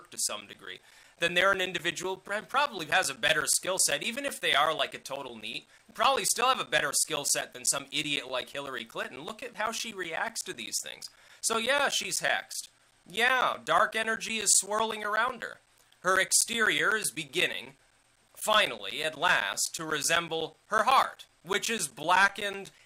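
From 0.16 s to 22.79 s the audio suffers periodic USB or driver dropouts. Every 0.125 s, eight times a second, something stalls the bus or driver and around 10 ms of sound is lost and replaced by silence, about two hundred gaps in all. They are heard as a steady ticking that appears only while there is signal. The strict regular spacing sets them apart from random clicks or irregular network packet loss.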